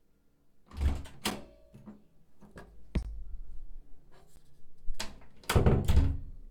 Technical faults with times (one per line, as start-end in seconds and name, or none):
1.30 block of digital silence
3.03-3.05 block of digital silence
4.36 block of digital silence